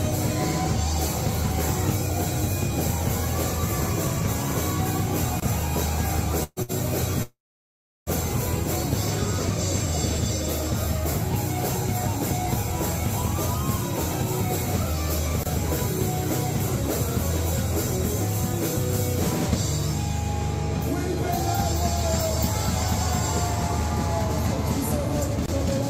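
At 5.40 s a short hard-edged hole of about 25 ms interrupts the sound. It is a gap between chunks: the audio arrives in 10-second pieces, and silence is left at each join.

From 6.43 to 6.59 s and again from 6.62 to 6.72 s, the sound stretches into a brief fading hold before jumping ahead. These are bursts of packet loss. Roughly 120 ms and then 60 ms never arrived, and the receiver covered each hole by extending the last sound, ending the first with a moment of silence.

Between 7.23 and 8.09 s, the sound trails off into a fading continuation and then about 0.7 s of silence, resuming further on with about 840 ms missing. This is likely a long network dropout, where nothing reached the receiver and its concealment ran out.

The same 25 ms chunk gap recurs at 15.43 and 25.46 s, about 10 s apart, each a crisp dropout with no sound lost.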